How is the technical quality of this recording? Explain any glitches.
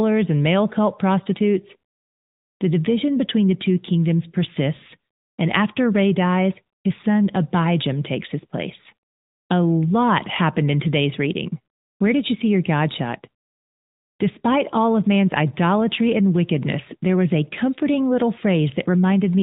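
The technical quality is limited by one fault running through the whole recording. Throughout the speech, AMR narrowband mobile codec damage is plainly audible: the voice sounds boxed-in and dull, with nothing above 4 kHz, and carries a buzzy, synthetic edge. The mobile speech coder models the vocal tract with a few pulses per 5 ms, and the sound fits one of its higher-rate modes, around 10 kbps.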